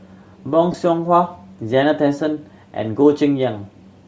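Throughout the speech there is a breathy, grainy edge, with the upper spectrum thinned out and patched with a noisy hiss. This is plainly audible damage from Bluetooth LC3 compression, likely at a low bitrate near 32 kbps, zeroing high-frequency detail and filling it with noise.

From 0.72 to 0.74 s the sound briefly turns into a short noisy smear lasting about 20 ms. This is lost LE Audio frames, which fits two 10 ms frames going missing, with the decoder repeating the last spectrum with randomised signs to cover the gap.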